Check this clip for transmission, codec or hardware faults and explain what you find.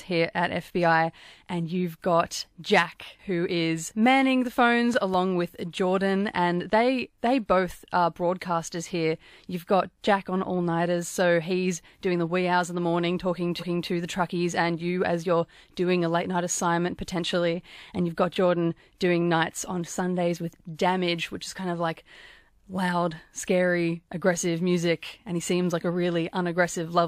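Two faults turn up in this speech clip, a double pop early on and a stutter from repeated frames about halfway through.

At 4.94 to 5.16 s, just after "who is manning the", there's a loud pop: two sharp thumps in quick succession, peaking a few dB above the speech, which carries on underneath. It's likely a voltage spike from a plug, switch or static discharge getting into the signal chain.

From 13.59 to 13.86 s, after "in the morning talking" and before "the truckies and you", there are repeated frames. A 0.28 s chunk plays twice, so you hear a stutter, and the clip runs 0.28 s longer. That fits a short run of compressed frames being sent or written twice.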